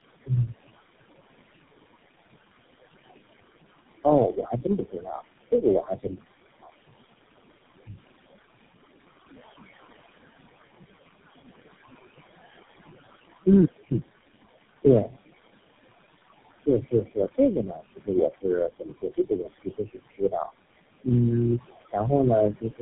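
Throughout the clip a noise suppressor pulls the room noise down by about 18 dB, so the background falls in the gaps and swells under the speech. The room noise sits about 11 dB below the speech. Tandem speech coding is also present for the whole clip: the call appears to have been re-encoded through four low-rate codecs in a row, which fits a chain ending in GSM full rate. Each pass degrades the last, leaving rough, warbly, muffled speech with nothing above 3.8 kHz.

From 4.04 to 6.23 s, speech cut by the noise suppressor occurs as the suppressor mistakes parts of the speech for noise and dips them by up to about 19 dB, swallowing roughly a second of sound in total.

From 13.91 to 14.15 s, a time-compressed catch-up occurs. After a stall the player drains its backlog at 2× speed by splicing out fragments, so the audio rushes at its normal pitch.

At 14.83 to 15.14 s the suppressor again clips the speech, by up to about 14 dB, and a brief fragment goes faint.

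From 16.66 to 20.52 s the same fault returns. Drops of up to about 21 dB leave roughly a second and a half of speech sounding faint and swallowed.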